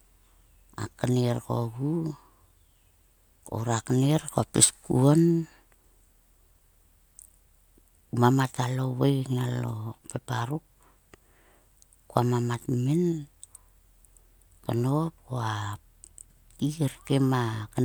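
No technical faults are audible.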